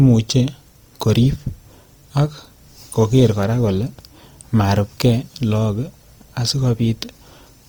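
Opus compression damage runs through the whole of this speech clip, from start to finish. The sound keeps its full high-frequency range, yet the tonal parts of the voice come across rough, noisy and grainy rather than swirly, with plainly audible damage. That is the likely mark of Opus in its music (CELT) mode at a low rate, around 24 kbps: starved bands are refilled with folded or noise-like content instead of being left empty.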